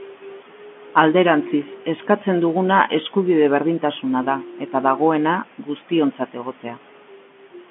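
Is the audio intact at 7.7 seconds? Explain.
Yes, the audio is intact at 7.7 seconds, with the speech carried cleanly through ordinary G.711 telephone coding and its usual narrow band that stops short of 4 kHz.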